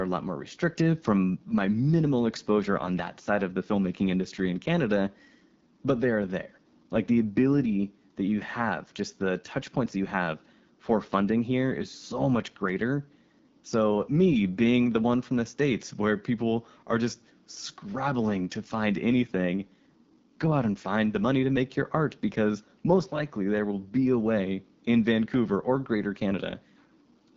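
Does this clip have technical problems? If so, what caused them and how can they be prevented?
Yes. The speech carries AMR wideband (HD Voice) codec damage from start to finish. It is plainly audible. Nothing sounds above about 7.6 kHz. The codec models speech as pulses shaped by a vocal tract filter. At very low rates that model is too coarse, so the speech turns rough and raspy. The top band is only synthetic noise. The roughness fits the 8.85 kbit/s mode. To prevent it, use 12.65 kbit/s or higher.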